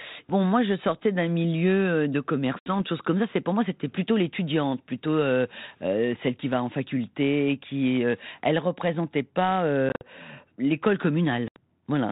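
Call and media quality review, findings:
Packet loss on an ADPCM call, 2.59–2.73 s, between "d'un milieu euh de" and "choses comme ça c'est": hard-edged 70 ms silence, about seven packets; speech returns slightly distorted while the decoder's predictor and step size resync.

9.89–10.03 s, after "qui elle représentait pas": 90 ms lost, scattered across 120 ms, longest run 50 ms; choppy holes, each with a rough re-entry.

11.48–11.57 s: 80 ms hole, similar mistuned restart.

Distinguishing: unlike a plain dropout, the onset after each hole is distorted, settling within tens of milliseconds. The G.726 path, consistent with 32 kbit/s ADPCM, sounds band-limited below 4 kHz with light coding noise.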